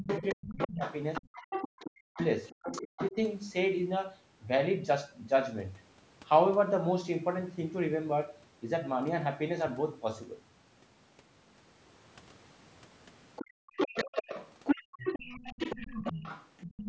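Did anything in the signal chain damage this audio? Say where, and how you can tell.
Yes. Speech suppressed in double talk runs from 0 to 3.16 s, at the call-processing stage. The talker's speech is turned down, by roughly 40 dB at its deepest, for around a second and a half in total. The likely cause is an echo canceller that could not separate the talker from loudspeaker echo and so turned both down.

Other side's voice leaking through appears from 0.08 to 3.11 s and again from 13.36 s to the end. A second voice sits roughly 5 dB below the talker. It is likely residual loudspeaker echo that the call's echo canceller failed to subtract from the microphone signal.

Background gated by the echo canceller occurs at 1.22–1.34 s (about 34 dB down), 13.45–13.74 s (about 40 dB) and 14.84–14.97 s (about 38 dB). The room tone briefly vanishes while the loudspeaker plays, as the canceller clamps the microphone hard, then returns when it releases.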